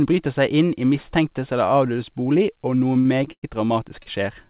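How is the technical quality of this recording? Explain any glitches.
The speech has three brief timing glitches, all within the last one and a half seconds. The sound is band-limited, with nothing above 4 kHz, which fits a narrowband G.711 call path.

Short stall from a late packet, at 3.00–3.07 s and 4.03–4.08 s: a packet arrived late and the jitter buffer emptied, so the last sound was stretched for about 46 ms and then 32 ms before continuing. Nothing is lost, but a sound is held with a slight buzz or dip. On a spectrogram the harmonics run on flat and smeared.

Call audio freeze, at 3.32–3.45 s: the sound is held as a fading buzz or hiss that drops to silence for about 70 ms, inserting a gap of about 105 ms before speech resumes. This was likely caused by packets being held up in transit, which emptied the jitter buffer. The waveform shows a decaying tail, then a flat line.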